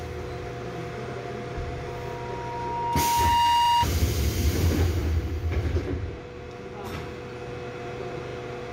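At 1.86 s a loudspeaker feedback squeal starts. The mic is hearing its own speaker, and at 947 Hz the loop gain tops one, so that tone feeds on itself. It swells over about a second and a half to roughly 10 dB above the sound, then stops at 3.87 s.

Right near the tail of that squeal, at 3.65 s, you get repeated frames. A 40 ms chunk, about two compressed frames' worth, plays one extra time, giving a quick stutter. It happens again at 8.27 s, where a 40 ms block plays twice more and adds 80 ms.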